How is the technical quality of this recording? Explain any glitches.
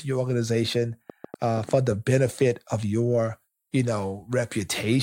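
The recording has one clear glitch. From 1.10 to 1.70 s there is a train of clicks: around five similar pops at an uneven pace near 6.8 per second, about 5 dB above the speech, likely from interference or a faulty connection. A waveform shows narrow spikes, and a spectrogram shows thin vertical broadband lines.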